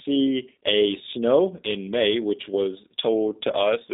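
From start to finish, the speech carries G.729 codec damage, plainly audible. The low-rate coder rebuilds the speech from a vocal tract model, a pitch predictor and a few pulses per frame, which fits an 8 kbit/s G.729A stream. The band is squeezed to about 300 Hz to 3.7 kHz, with nothing above 3.8 kHz. Speech stays intelligible but sounds rough, buzzy and slightly synthetic. Sibilants lose their edge.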